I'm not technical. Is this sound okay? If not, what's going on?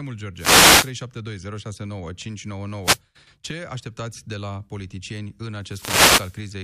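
No. Short bursts of hissing static break through the speech at 0.35 to 0.94 s, 2.83 to 2.99 s and 5.59 to 6.49 s. These are wireless microphone noise hits: the radio signal briefly faded.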